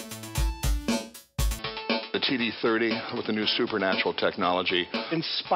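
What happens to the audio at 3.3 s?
At 3.3 s the audio is in the dull, band-limited stretch that runs from 1.59 s to the end, with nothing above about 5.3 kHz, a new noise floor roughly 30 dB under the signal, and no gap or level jump at the changeover. The likely cause is an input switched to a poorer device with a narrower passband and its own background noise.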